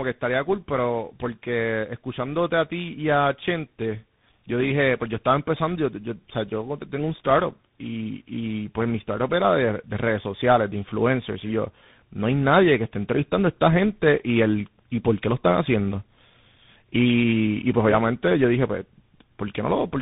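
From start to finish the speech sounds rough, muffled and warbly, with nothing above about 3.8 kHz. This is tandem speech coding: the call was decoded and re-encoded at each network border, and every coder worked on the previous one's degraded output. The texture fits a GSM full-rate stage followed by two CVSD stages, linked through G.711 hops, so the damage from three speech codecs compounds.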